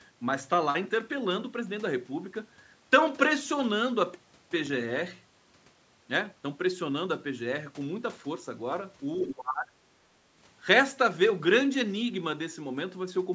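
A speech clip in which, from 9.29 to 9.86 s, the talker's level suddenly sinks by about 25 dB, with roughly half a second of sound audibly ducked or chopped. This is speech suppressed in double talk, likely an echo canceller mistaking the talker for loudspeaker echo while the far end spoke. A waveform shows a sharp notch in the envelope there, and a spectrogram shows energy thinning or breaking into gaps, the content stopping at 8 kHz as call processing sets.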